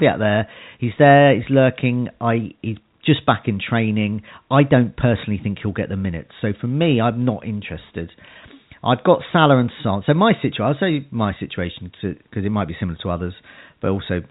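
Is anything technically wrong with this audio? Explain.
No, nothing in this speech clip stood out as a technical problem on listening.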